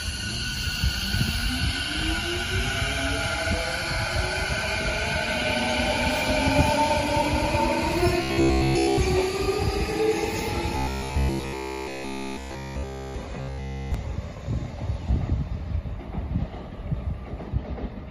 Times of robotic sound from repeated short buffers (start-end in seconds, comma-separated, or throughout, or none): 8.23-8.99, 10.76-13.15, 13.40-13.94